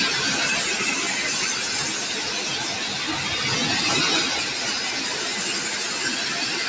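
A noise suppressor designed for speech stays engaged for the whole clip and treats the sustained parts of the sound as noise to be removed. Sharp onsets mostly pass, but held tones, ambience and decaying tails are pulled down by about 5 dB and then released, so the level pumps and flutters and the sound thins out between attacks. This comes on top of the call's microphone processing, which leaves nothing above 8 kHz.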